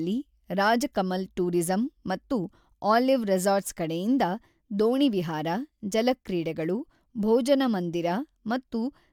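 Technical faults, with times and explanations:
No technical faults can be heard in this speech recording; the signal carries no audible dropouts, clipping, glitches or other transmission or processing defects.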